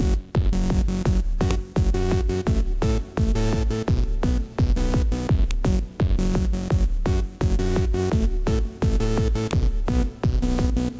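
Sharp, loud clicks snap out of the sound at 1.51 s, 5.51 s and 9.51 s, each lasting one to two milliseconds and landing regardless of what the signal is doing. Their regular 4.0 s spacing marks them as a file header played as audio: the clip was assembled from separate WAV pieces whose header bytes were never stripped, so those few dozen bytes of metadata play back as raw samples at every join.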